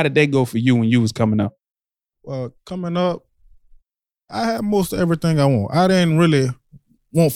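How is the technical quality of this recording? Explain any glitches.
The technical quality holds up, with no glitches to explain in this recording.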